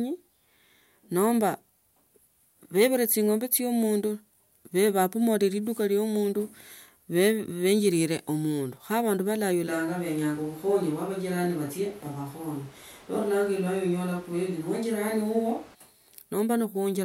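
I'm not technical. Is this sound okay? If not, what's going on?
No. Switch to a distant microphone from 9.7 to 15.7 seconds: the speech abruptly turns hollow, roomy and thin at similar loudness, likely because a faraway microphone replaced the close one.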